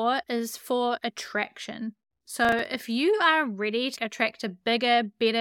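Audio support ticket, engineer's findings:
Processor overload crackle, 2.45–2.65 s: CPU missed a handful of buffer deadlines, buffers around 5 ms, gaps left silent. Waveform shows hard-edged silent notches; spectrogram shows broadband vertical streaks.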